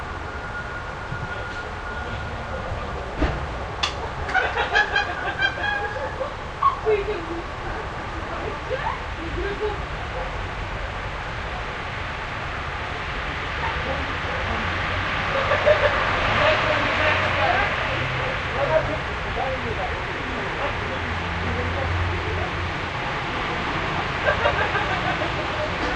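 A recording of everyday sounds with nothing technically wrong with it.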